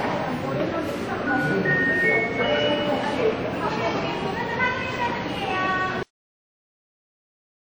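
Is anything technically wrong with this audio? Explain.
Yes, there are two faults. Throughout, the sound has a plainly audible ringing, washy quality, with a hiss that swells and fades with the signal and nothing above about 19.7 kHz. This is likely WMA compression at a low bitrate, which fits around 48 kbps: the transform encoder's long blocks smear quantisation noise over tens of milliseconds and zero out weaker components.

At 6.03 s the audio stops dead in the middle of a sound and drops to digital silence with no decay. This is a cut-off end: the final buffers were never written or played, leaving silence where the sound should have continued.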